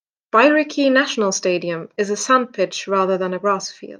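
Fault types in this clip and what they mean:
Crude rate conversion: speech resampled unfiltered, fitting linear interpolation from 44.1 to 48 kHz; a faint inharmonic fizz tracks loud, bright sounds, unlike codec warble.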